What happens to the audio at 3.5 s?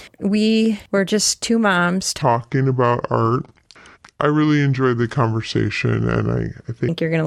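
At 3.5 s the speech is deep and dragged out: it sits in a section at the wrong speed running from 2.22 s, just after "were just two moms", to 6.89 s, just before "you're going to like". Playback there runs at 0.693 times the original rate, so everything is stretched and the pitch drops by roughly seven semitones. Speed and pitch fall together, which points to the section likely having been played or resampled against the wrong clock.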